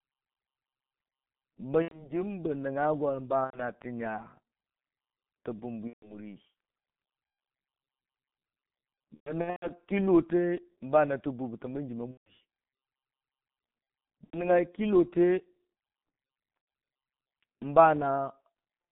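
Throughout, the speech carries G.723.1 codec damage: a muffled, hoarse sound with smeared consonants, which fits a 6.3 kbit/s setting. On a spectrogram the energy sits between 150 Hz and 3.7 kHz with nothing above, and harmonics look blurred in coarse 30 ms blocks.

VoIP packet loss concealed by the speech codec then strikes at 1.82–2.14 s, at 3.44–3.60 s before "tə nya", at 5.87–6.16 s after "tə bumbwi", at 9.14–9.72 s before "kɨllote bana tə", at 12.11–12.33 s, at 14.24–14.50 s and at 16.61–16.67 s. Each time the decoder keeps replaying its last pitch and filter while turning the gain down, so the voice stretches into a fading buzz or coloured noise. These gaps last 90 ms, 90 ms, 150 ms, 300 ms, 150 ms, 90 ms and 60 ms. The 9.14 s one is spread over 480 ms, with its longest run at 120 ms. A spectrogram shows frozen, evenly spaced harmonic lines. The waveform shows a repeating cycle that shrinks and stays weak for a while after the packets return.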